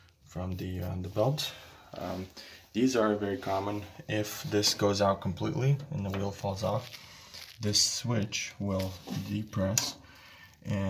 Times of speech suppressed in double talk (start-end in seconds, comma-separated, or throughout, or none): none